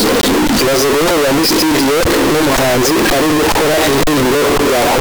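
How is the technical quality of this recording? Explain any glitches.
Poor: the speech is harsh and uniformly loud throughout, with a buzzy, near-square tone, and background noise as loud as the talker, though pitch can still be followed. This is float read as integer across the whole clip. The 32-bit float samples were likely decoded as 32-bit integers, so the sign and exponent bits drive the waveform to an almost fixed, high level.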